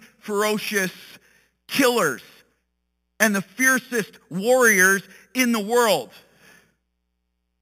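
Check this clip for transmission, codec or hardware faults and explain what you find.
One fault runs through the whole speech clip: imaging from sample-and-hold upsampling. Samples were simply repeated without smoothing, which fits conversion from an 8 kHz rate. Mirrored copies fill 4 to 8 kHz at about -11 dB, a metallic fizz tracking the speech level, unlike steady hiss.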